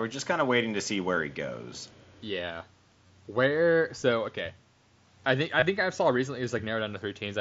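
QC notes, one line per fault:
1.16 s, 3.07–3.10 s, 5.60–5.62 s, concealed Bluetooth headset packet loss: the 7.5 ms gap at 1.16 s is nearly hidden, while the 22.5 ms gaps at 3.07 s and 5.60 s, about three headset frames each, turn into a brief buzzy tone held at full level with a small warble as real audio resumes. The receiver repeated the closest-matching stretch of recent waveform, so there is no silent dropout or click.
1.77–2.22 s, echo leak: a faint delayed copy of the voice, far below the direct speech and trailing it by about 394 ms, is heard for roughly half a second. This is likely a far-end loudspeaker whose echo canceller let part of the pickup through. The long fixed lag and separate copy set it apart from room reverberation, which would blend into the voice as a smooth tail.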